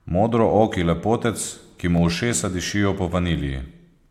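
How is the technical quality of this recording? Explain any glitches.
The speech has one audible glitch. At 1.98 s, damaged data in the compressed stream causes a brief glitch. The decoder misreads the corrupt frame, loses sync, then finds the next header.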